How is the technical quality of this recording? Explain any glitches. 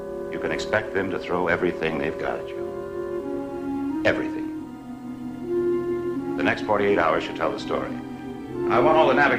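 Nothing in the recording stood out as a problem on listening, so there are no glitches to explain.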